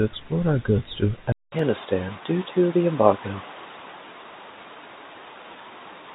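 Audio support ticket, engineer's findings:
Input switched to a poorer device at 1.32 s, likely. A 200 ms gap, then a changed tone and background noise about 30 dB down. Level unchanged to the end.

Dropped samples at 1.59 s, likely. Single sharp click. Roughly 0.2 ms missing, so the waveform jumps with no audible loss of sound.

G.711 A-law telephone band throughout. Nothing above 4 kHz.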